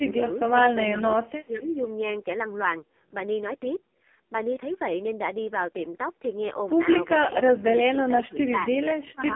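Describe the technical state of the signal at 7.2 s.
At 7.2 s the speech is passing through the AMR narrowband mobile codec. It is band-limited to roughly 200 Hz to 3.5 kHz, with nothing above 3.6 kHz. The coding damage is heavy, giving a buzzy, synthetic quality that points to one of the codec's lowest modes, around 5.15 kbps.

From 7.21 s to 8.72 s the speech is suppressed in double talk, likely because an echo canceller could not separate the talker from the loudspeaker echo of overlapping far-end sound. The voice drops in level, at worst by around 20 dB, and parts of it fade out over about a second.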